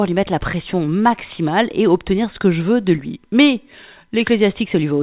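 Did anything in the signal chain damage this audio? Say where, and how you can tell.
No, nothing in the signal chain damaged this audio.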